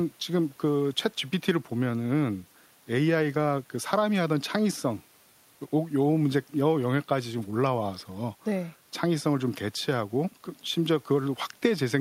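No technical faults are audible.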